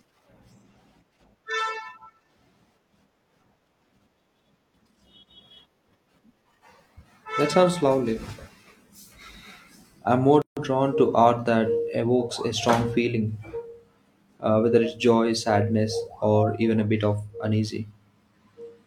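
A speech recording with a gap at a join of encoded pieces: from 10.42 to 10.57 s a gap of about 150 ms cuts in, its edges smeared by the codec. Unlike a dropout, nothing is lost; speech resumes exactly where it stopped, because untrimmed encoder delay and end padding remain.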